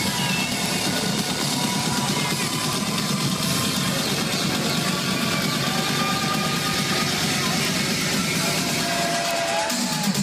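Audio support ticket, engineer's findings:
Word clock ticks, 0.14 s to 10.19 s. Regular clicks about every 0.05 s, roughly twenty a second, so they merge into a rattle or buzz. Around two hundred in all. Probable component: digital input receiver not locked to sender clock. Clocks drift a few hundred ppm apart. Each slip drops or repeats one sample.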